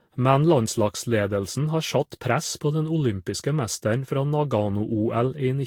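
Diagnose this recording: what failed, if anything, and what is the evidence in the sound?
Throughout the speech the sound is swirly and hollow, with smeared, blunted attacks and a watery texture that seems worse than a single moderate-bitrate encode would give, and nothing is present above 19.4 kHz. This is a codec-stage fault, likely generation loss: repeated lossy passes, consistent with Vorbis at around 70 kbit/s about seven times over, each requantising on a shifted frame grid so that noise and spectral holes accumulate.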